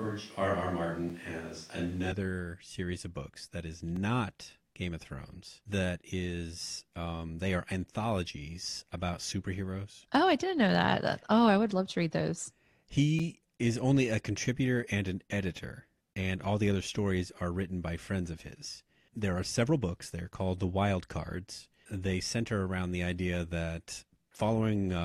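From the start of the clip to about 2.12 s, the speech sounds roomy and hollow, with the low end thinned out. This points to a switch to a distant microphone, likely because the close microphone's signal was missing and a pickup further from the talker was used. The level barely changes, but room noise sits roughly 30 dB below the speech. At 2.12 s the sound snaps back to the close, fuller pickup.

Blocks of digital silence occur at 1.09 s, at 3.96 s after "of books that is", at 11.23 s after "I didn't know that", and at 13.19 s just before "is only a contributor". In each, the output drops out abruptly and returns with no fade, heard as a tick or dip. Three of the gaps last 5.8 ms, which fits an unfilled 256-sample buffer. The one at 3.96 s is shorter, at 2.56 ms.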